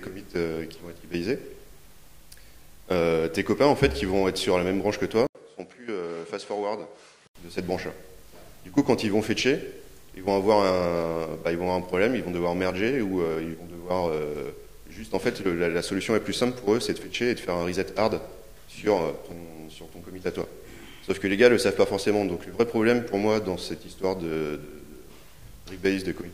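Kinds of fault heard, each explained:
Input switched to a poorer device: from 5.27 to 7.35 s the sound turns duller, with nothing above 11.4 kHz and the level down by around 10 dB, after an 80 ms gap at the switch. This is likely a change to a narrower-band microphone or headset profile, bringing its own noise floor.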